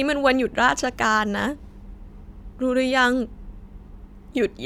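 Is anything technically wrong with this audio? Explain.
No, nothing is technically wrong with this audio.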